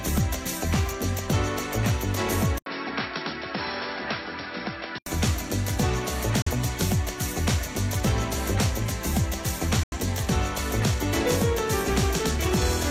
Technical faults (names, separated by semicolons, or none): input switched to a poorer device; digital broadcast dropout